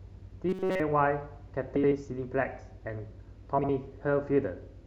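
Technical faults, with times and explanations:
0.49–0.80 s, robotic sound from repeated short buffers: The speech turns into a rigid, metallic buzz pitched at 188 Hz, and essentially all of this stretch is a repeat rather than new audio. A 188 Hz buzz means a loop about 5.3 ms long, so the likely cause is that fresh audio stopped arriving in time and the playback software kept replaying its last tiny buffer. The real speech underneath was skipped, leaving a mechanical buzz that follows it only roughly.
1.76–1.92 s and 3.59–3.69 s, frames out of order: In each stretch, two neighbouring blocks of audio play in swapped order. The blocks are 78.4 ms each in the first case and 52.2 ms each in the second, which fits runs of three and then two frames of roughly 26 ms. Each swap sounds like a brief garbled flutter. Nothing is missing, so the timing of the speech around these stretches stays intact.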